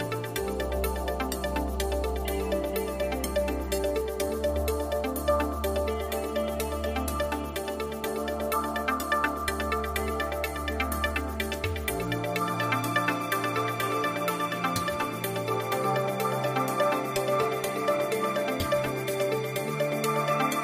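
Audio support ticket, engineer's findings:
No audible faults found on review; nothing to report.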